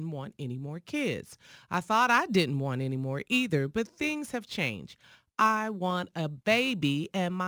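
A gritty, inharmonic fizz rides on the speech from start to finish, roughly 25 dB below it and strongest on loud and bright sounds. This is crude rate conversion: samples were simply dropped rather than filtered, which fits a 48 kHz to 44.1 kHz change.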